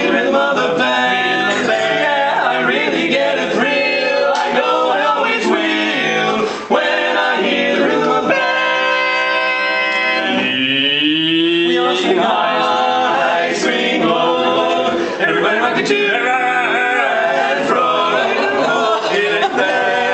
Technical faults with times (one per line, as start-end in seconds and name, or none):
none